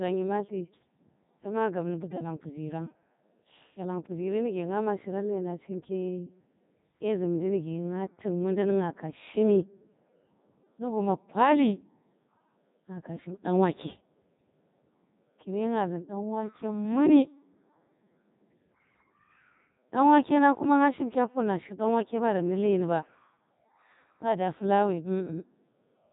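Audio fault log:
throughout, Codec 2 vocoder: heavily damaged, robotic, buzzy speech with nothing above 3.8 kHz, consistent with its 3.2 kbit/s mode. Only pitch, voicing, energy and a coarse spectral envelope are carried, and the decoder rebuilds the voice from sine waves, discarding the original waveform.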